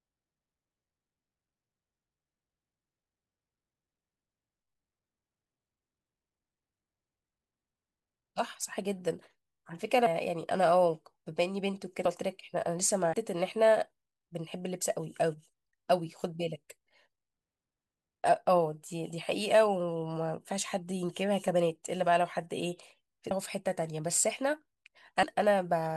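Compressed frames skipped at 10.06, 12.05, 13.13, 23.31 and 25.23 s. Missing frames, which fits a 24 ms frame size, make the speech jump ahead by about 0.15 to 0.7 s.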